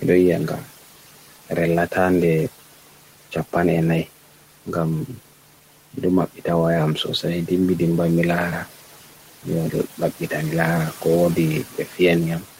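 Speech with noise suppressor artifacts throughout: the steady background is pulled down by about 12 dB between phrases and swells back under the talking. Unlike the room noise itself, which sits about 18 dB below the speech, this pumping follows the talker frame by frame. From 11.70 to 11.99 s, speech is cut by the noise suppressor: roughly 150 ms of quiet sound is dipped by up to about 11 dB and sounds swallowed. A level drop or dropout would hit loud and soft parts alike, but this one takes only the faint parts, which the suppressor mistook for noise.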